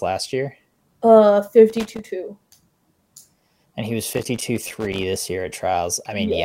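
Loose connector crackle breaks into the speech from 1.70 to 2.04 s and again, longer, from 4.13 to 5.03 s: a worn contact making and breaking chops the signal into irregular scratchy bursts, unlike the evenly spaced clicks of a buffer fault.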